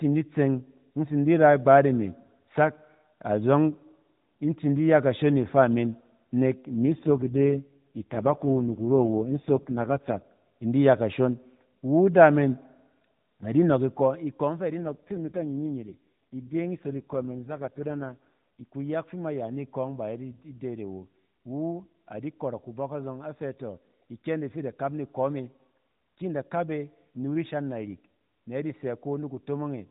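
Speech over an AMR narrowband mobile link, with two AMR rate drops at 6.74–10.22 s and 14.80–18.65 s. The voice turns buzzy and synthetic without any gap, consistent with the codec falling from 12.2 to 4.75 kbps.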